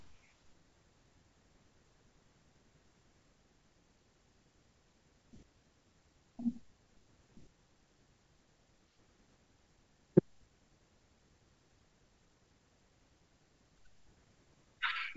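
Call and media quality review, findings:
Nothing to flag here, just G.722 wideband coding at 64 kbit/s doing its job, with the speech reaching up to about 7.7 kHz and nothing above that.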